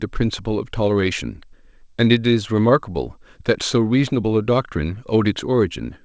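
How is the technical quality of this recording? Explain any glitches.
The technical quality is sound, with no glitches to explain, and the speech carries the band limit of a G.722 call path with nothing above 8 kHz.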